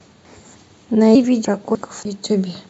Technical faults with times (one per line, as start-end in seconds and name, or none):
1.15 audio missing between chunks
1.75 audio missing between chunks
2.05 audio missing between chunks